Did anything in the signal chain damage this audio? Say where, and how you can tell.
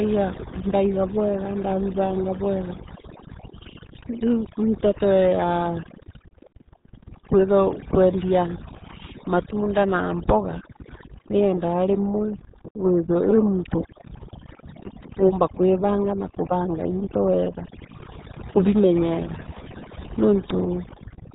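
Yes. Overdone noise removal at the call-processing stage runs through the whole clip: the background sits near silence with twinkling specks. Unlike codec damage, this comes from bands near the noise estimate being switched off, so quiet speech detail vanishes with them.

The RealAudio 14.4 codec stage adds heavy damage throughout: nothing passes above about 3.8 kHz, and the speech is muffled and gargly. That hard top edge and gargle, rather than twinkling gaps, points to an 8 kbit/s dial-up speech codec.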